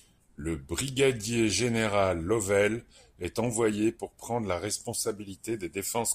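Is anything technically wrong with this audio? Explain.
No, nothing technically wrong can be heard in this speech recording. No fault turns up anywhere in it.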